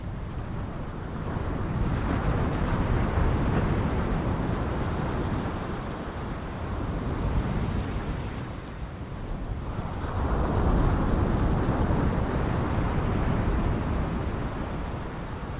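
No faults can be heard in the audio, which has passed through a WebRTC call path whose narrow telephone band, with nothing above 4 kHz, points to G.711 mu-law coding at 64 kbps.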